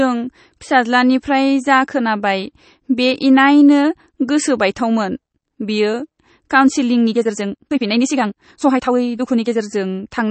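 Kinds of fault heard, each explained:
MP3 compression: The whole recording sounds watery and swirly with smeared consonant onsets, likely from low-bitrate MP3 encoding, around 32 kbps. A spectrogram shows nothing above 8.3 kHz and speckled, flickering patches where weak frequency lines drop in and out frame by frame.
Time-stretched section: From 6.99 to 9.61 s the speech suddenly runs about 1.65 times faster while its pitch stays the same, sounding choppy and rushed. The waveform looks compressed in time there, with syllables packed closer and abrupt splice points.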